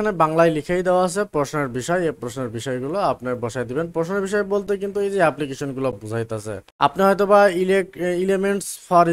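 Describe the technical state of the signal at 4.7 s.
An underrun with held sample occurs at 4.67 s and lasts about 8.7 ms. The output buffer ran dry and the converter kept repeating the last sample value it had, so the waveform flattens into a short plateau instead of dropping to silence. The sound stops abruptly with little or no click. No audio was lost during the gap, so playback resumes where it stopped and the restart is soft.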